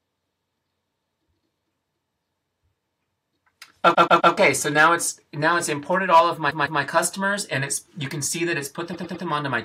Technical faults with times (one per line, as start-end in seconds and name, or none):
3.93-4.32 repeated frames
6.49-6.81 repeated frames
8.92-9.24 repeated frames